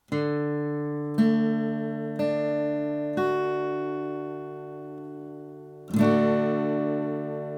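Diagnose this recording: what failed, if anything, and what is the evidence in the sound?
Nothing in the recording stood out as a problem on listening.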